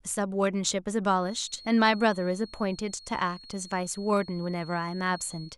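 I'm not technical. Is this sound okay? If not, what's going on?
No. A feedback whistle runs from 1.12 s to the end: a quiet 4.3 kHz tone that swells and fades slowly, likely from loudspeaker sound leaking back into the microphone.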